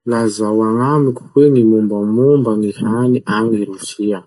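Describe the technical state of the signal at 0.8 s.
At 0.8 s the speech carries channel delay (comb filtering), present across the whole clip. One channel arrives roughly 0.7 ms behind the other, and when the two are summed, the shared content cancels at evenly spaced frequencies, the first notch near 700 Hz, with further notches stacked above it. The result is a hollow, phasey tone whose notches stay fixed in place, which separates it from a flanger or from moving cancellation caused by drift.

The same moment shows codec damage that is plainly audible and runs throughout. Nothing is present above about 11.2 kHz, a hard, fixed ceiling rather than a gentle roll-off. Weak spectral detail switches on and off between frames, giving a watery, swirly texture, with metallic chirps on s sounds and smeared consonant onsets. That frame-to-frame flicker, beyond a simple low-pass, marks the likely cause as MP3 compression, and it points to a low bitrate somewhere near 47 kbps.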